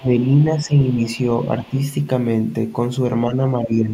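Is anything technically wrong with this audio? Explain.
Yes. This speech clip has echo-control problems of two kinds.

Other side's voice leaking through, at 0.00–0.04 s, 0.21–0.25 s and 1.39–1.85 s: a faint second voice, far below the talker's speech. The likely cause is an echo canceller leaving some of the far end's loudspeaker sound in the microphone signal. Unlike suppression, something extra is added here rather than taken away.

Speech suppressed in double talk, at 0.00–0.10 s, 0.56–1.01 s, 1.57–1.77 s, 3.30–3.41 s and 3.58–3.93 s: the talker's own voice briefly sags, mostly by around 10 dB and most deeply at the very start. This is likely the canceller turning everything down while both sides speak. It differs from leakage because the main voice loses level.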